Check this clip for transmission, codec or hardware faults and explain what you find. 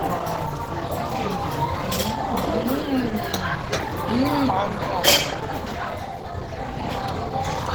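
One fault runs the whole way through: Opus compression. The sound is grainy and rough throughout, with a hoarse, muffled edge. That fits a low-rate encoder, likely around 16 kbps, in hybrid mode, filling starved bands with noise.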